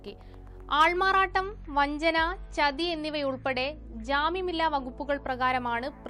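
The audio drops to a lower-bitrate rendition of an adaptive stream from 1.28 s to 5.28 s. The switch is abrupt, with no gap. During that stretch everything above about 10.5 kHz is missing, so the top end sounds dull, and coding artefacts grow more audible. The loss points to a fall from roughly 128 kbit/s MP3 to about 40 kbit/s. The player likely stepped down because the connection slowed. At 5.28 s the fuller quality returns just as suddenly.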